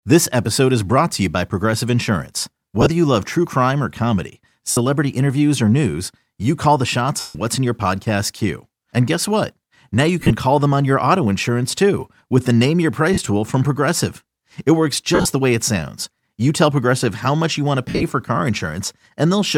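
Lost LE Audio frames break up the speech at 2.81, 4.71 (after "true crime or comedy"), 7.20, 10.20, 13.14, 15.15 and 17.88 s, each 40 to 160 ms. The LC3 decoder concealed each gap by repeating the last spectrum with randomised phase, so the speech smears into brief noisy patches.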